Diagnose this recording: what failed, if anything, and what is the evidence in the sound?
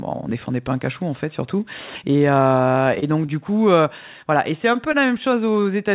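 Network: repeated packet loss (robotic sound) from 2.84 to 3.30 s. Four gaps up to 21 ms are each patched by repeating the last sound, so it turns choppy with pieces missing.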